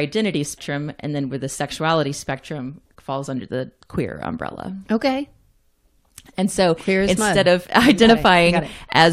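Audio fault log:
0.57 s, damaged data in a compressed stream: a single short blip breaks into the speech early in the clip and is over in a fraction of a second. Here part of the encoded stream was corrupted, so the decoder could not parse the affected frame correctly and briefly lost sync. It output garbled or missing spectral data before locking onto the next valid frame header. That malformed frame is what produces the abrupt, unnatural artefact.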